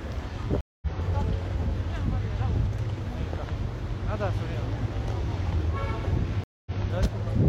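Twice the connection dropped and the player rebuilt its decoder mid-stream, a stream reconnect each time. From 0.61 to 0.87 s the audio goes silent for 210 ms, then picks up roughly a fifth of a second further on, so a short stretch of sound is skipped. From 6.44 to 6.75 s a 223 ms gap is followed by a resume 93 ms earlier, briefly repeating what was just heard. Both restarts come in muted or faded.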